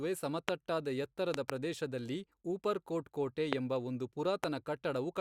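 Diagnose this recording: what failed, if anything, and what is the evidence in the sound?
Loud pops at 0.49 s, a double pop from 1.34 to 1.52 s before "ಪ್ರದೇಶದಲ್ಲಿ ಊಪರ್ಕೋಟ್ ಕೋಟೆ ಎಂಬ", 3.53 s before "ಎಂಬ ಒಂದು", and 4.44 s, standing about 20 to 25 dB above the speech. They show as vertical full-band stripes and lone waveform spikes. The likely cause is voltage transients in the analogue wiring.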